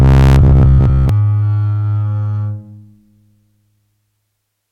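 Robotic sound from repeated short buffers runs from 0.02 to 1.09 s in this music clip, a rigid metallic buzz at 66.8 Hz. It likely comes from audio arriving too seldom, with playback looping roughly 15 ms chunks for most of that span.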